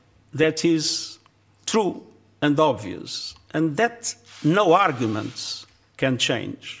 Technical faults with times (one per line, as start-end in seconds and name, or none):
none